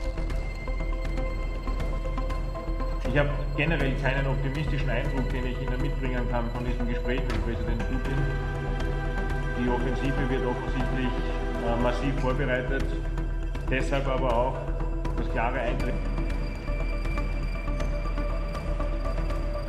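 Nothing is technically wrong with this audio.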